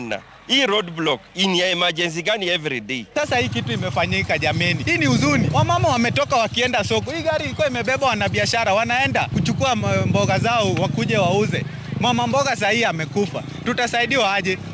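No technical faults can be heard in this audio.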